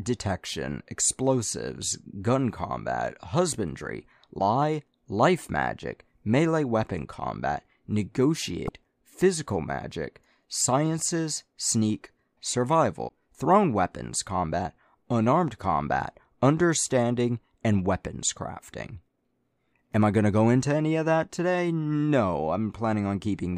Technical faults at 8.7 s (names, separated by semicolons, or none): broken MP3 bit reservoir